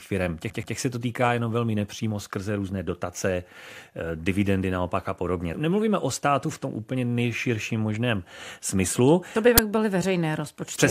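It's a speech clip with two faults. Near the start, from 0.49 to 0.75 s, just before "se to týká jenom", there's a stutter from repeated frames: a 128 ms chunk of compressed audio plays twice more, which fits a small run of frames being sent again, and it stretches things by 256 ms. Then at 9.58 s there's a sudden, loud 10 ms crack, the classic sign of an uninitialised buffer, where whatever junk was sitting in memory got played out as samples.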